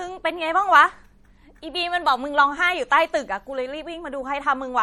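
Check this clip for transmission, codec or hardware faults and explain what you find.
One codec fault runs through the whole speech clip. The MP3 compression is audible from start to finish, likely from an encoder short of bits. Weak frequency lines drop in and out between frames, giving a plainly watery, swirly texture that fits a low bitrate around 48 kbps. The treble is cut off, with nothing above 19.4 kHz.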